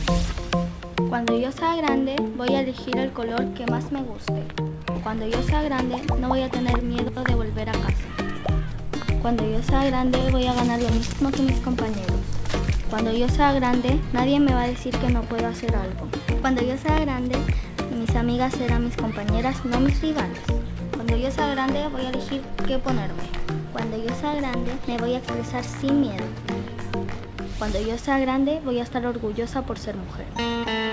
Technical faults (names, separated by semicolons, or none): none